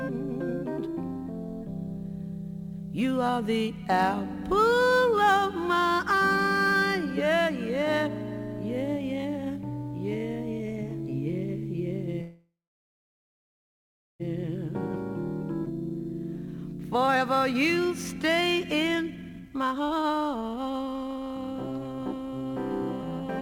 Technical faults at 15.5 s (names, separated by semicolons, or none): jitter buffer speed-up